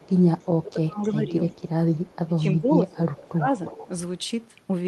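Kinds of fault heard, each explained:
Echo leak: Faint delayed copies of the speech keep surfacing, trailing by 320 ms and later 352 ms, mostly about 30 to 35 dB down but about 20 dB down near 3.7 s. The likely cause is a loudspeaker-side echo canceller letting residue through.
Speech suppressed in double talk: From 0.47 to 1.31 s and 2.2 to 3.54 s the talker dips by as much as about 20 dB, in chunks, while the other side speaks. Most likely the echo canceller mistook overlapping talk for echo and turned everything down.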